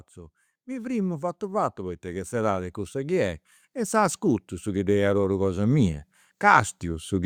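From 0.14 s to 7.21 s the level climbs steadily by about 13 dB: automatic gain rising. The gain control judged the incoming speech too quiet and kept turning itself up across about seven seconds, so the voice and the room noise beneath it grow louder together rather than the voice alone. On a waveform the envelope widens as a slow ramp; on a spectrogram every band, including the noise floor between phrases, brightens gradually left to right.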